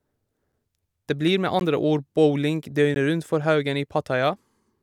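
At 1.6 s and 2.95 s the speech cuts to a block of digital silence, 16 ms and 15 ms long, where samples became zeros. Each cuts out and back with no fade, so it sounds like a tick rather than a smooth faded dropout.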